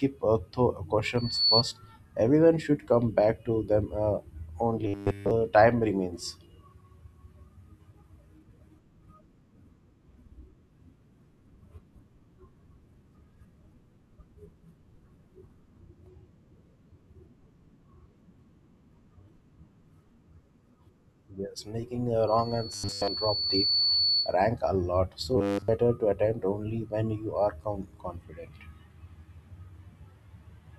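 A sharp, single 4.4 kHz tone swells up from 1.17 to 1.63 s, reaching full strength in about 0.3 s and ending about 5 dB louder than the speech. This is loudspeaker feedback squeal: a microphone is picking up the loudspeaker it feeds, and at that one frequency the loop gain exceeds one, so the tone keeps growing.

From 4.87 to 5.31 s the speech collapses into a rigid, metallic buzz pitched at 100 Hz that still loosely tracks the syllables. This is robotic sound from repeated short buffers. The likely cause is audio arriving too late, so the playback side loops the last 10 ms or so over and over in place of the missing audio. That 10 ms period is what stamps the fixed 100 Hz pitch on the sound.

The same 4.4 kHz feedback squeal returns from 22.27 to 24.37 s. This time it creeps in slowly over about 1.5 s and sits at roughly the level of the speech. Inside that stretch, from 22.73 to 23.08 s, the 100 Hz robotic buzz cuts in as well, though here most of the speech is replaced by the repeating fragment rather than all of it. 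The buzz comes back once more, fully robotic, from 25.37 to 25.68 s.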